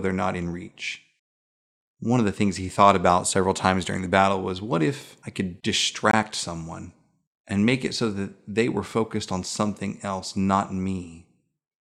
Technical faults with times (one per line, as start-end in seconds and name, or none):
6.11 gap between stream segments